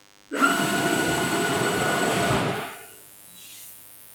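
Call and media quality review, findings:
DECT cordless phone buzz, present throughout. Steady, thin buzz at 100 Hz with a dense stack of harmonics. Sits well below the wanted sound, around 30 dB down. Probable component: analogue input stage or mic preamp near a DECT handset or base. Mechanism: the DECT radio bursts every 10 ms, and the audio circuit rectifies them. This turns the burst rate into an audible 100 Hz tone. Sharp burst edges give the rich harmonic content.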